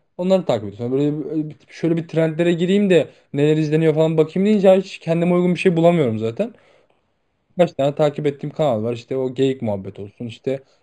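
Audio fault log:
throughout: imaging from linear upsampling. The speech has no true content above about 5.5 kHz, which fits an 11 kHz source raised to 48 kHz. Straight-line interpolation leaves a faint mirrored copy from 5.5 to 11 kHz, about 35 dB down. Sibilants gain a thin metallic shimmer.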